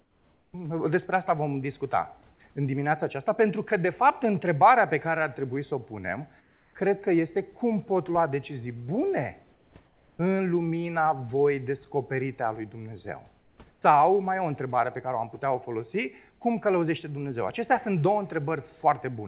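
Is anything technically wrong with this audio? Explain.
Yes. Comfort noise replaces the background in the pauses at 0–0.53, 6.41–6.74, 9.53–9.74, 9.86–10.19, 13.4–13.58 and 13.73–13.82 s. The room noise turns flat, featureless and about 2 to 4 dB quieter. This is likely discontinuous transmission, where the receiver fills silence with synthetic noise. The band stops at 4 kHz throughout, which fits a narrowband call codec such as G.711.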